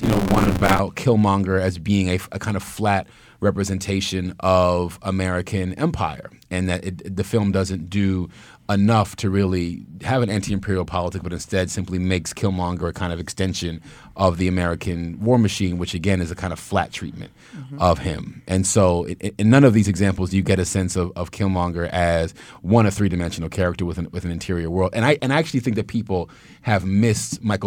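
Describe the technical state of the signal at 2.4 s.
At 2.4 s the speech signal is intact, with no audible technical fault at that moment.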